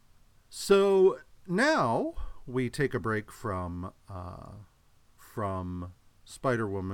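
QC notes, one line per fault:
Nothing in the speech stood out as a problem on listening.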